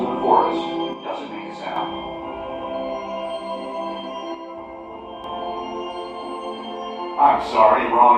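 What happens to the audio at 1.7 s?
One stereo channel has likely dropped out from 0.93 to 1.76 s, so after the mono sum the shared sound falls abruptly by about 6 dB.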